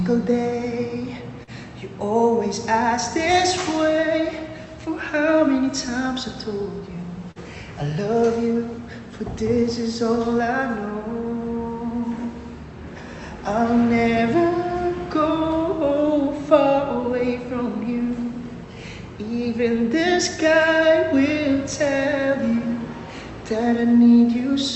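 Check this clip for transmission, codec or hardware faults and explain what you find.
Two brief dropouts come from short concealed packet loss, heard over an Opus-style call path whose band stops near 8 kHz. They fall at 1.43 to 1.50 s and 7.31 to 7.41 s. Each time about 40 ms of audio missed the decoder. The receiver continued the last sound and then blended back. Both are heard as a quick smear or wobble. The second also drops about 11 ms outright.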